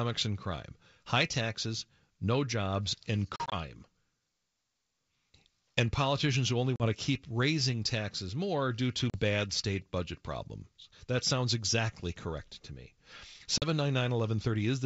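Packet loss on an ADPCM call cuts hard-edged silent holes at 3.36–3.55 s (80 ms lost in short gaps), 6.76–6.88, 9.10–9.17 and 13.58–13.64 s. The G.722 decoder's predictor loses sync, so speech resumes slightly distorted: flat-line waveform gaps and blank vertical spectrogram bands.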